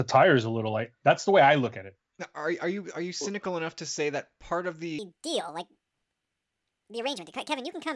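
Up to about 4.99 s things run at their natural pace. From there to the end the speech suddenly runs 1.5 times faster and jumps up about 7 semitones, so it sounds squeaky and rushed. That's a wrong sample rate problem: the samples are being clocked out faster than they were captured, with no conversion, so speed and pitch rise by the same ratio. A 1.5× jump fits 16 kHz material played back at 24 kHz.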